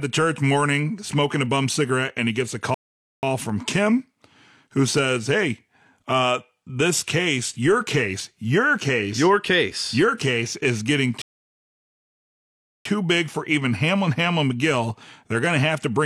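At 2.74 s the speech stops dead and the line goes silent until 3.23 s, then picks up exactly where it left off. This is a rebuffering stall: playback outran the downloaded data and the player waited about 0.49 s for more to arrive. None of the speech is skipped; the pause is simply inserted into the timeline, so everything afterward runs that much later.

Shortly after, at 3.50 s and again at 4.97 s, a single sharp click cuts through the speech. Each one is a brief discontinuity in the waveform, the likely cause being dropped samples, with a fraction of a millisecond missing so the signal jumps straight to a later value. The gap is far too short to remove any audible sound, leaving only the tick.

A second, longer rebuffering stall runs from 11.22 s to 12.86 s, adding about 1.64 s of silence before the speech resumes at the same point, again with nothing lost.

One more isolated click of the same dropped-sample kind appears at 15.46 s, near the end.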